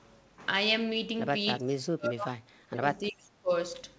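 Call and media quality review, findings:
Speech ducks and breaks up from 1.58 to 3.51 s, dropping by up to about 35 dB for roughly two seconds. Likely speech suppressed in double talk: the echo canceller treats overlapping talk as loudspeaker echo and attenuates both. The G.722 path caps bandwidth at 8 kHz.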